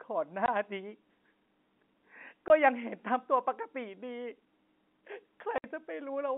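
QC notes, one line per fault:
0.46–0.48 s, 2.48–2.50 s, 5.58–5.64 s: packet loss filled with silence. The gaps run 20, 20 and 60 ms, which fits lost 20 ms packets replaced by silence. Their hard edges cut sharply into the band-limited telephone sound.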